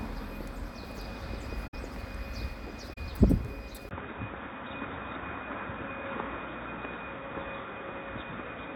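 Corrupt frame concealed, at 1.67 to 1.74 s and again at 2.93 to 2.98 s. Damaged data in the compressed stream was caught by the decoder, which filled the gap itself rather than playing garbage. The result is a soft-edged dip or smear rather than a click, about 75 ms long the first time, which fits three AAC frames, and about 50 ms the second, which fits two. Timing carries on unbroken past each patch.

Input switched to a poorer device, at 3.89 s and lasting to the end. The sound drops out for about 20 ms and then returns noticeably duller and boxier, with nothing above 3.8 kHz, a bandwidth limit that points to a narrower device. The likely cause is the recording changing its input mid-stream. Overall level stays roughly the same, but a new background hiss sits roughly 35 dB below the sound from this point on.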